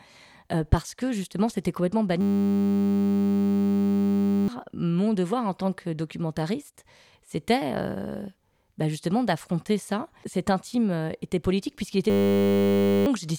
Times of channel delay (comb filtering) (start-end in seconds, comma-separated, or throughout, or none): none